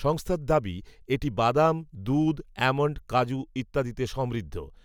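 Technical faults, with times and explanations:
Nothing technical stands out here; the speech comes across without any faults to point to.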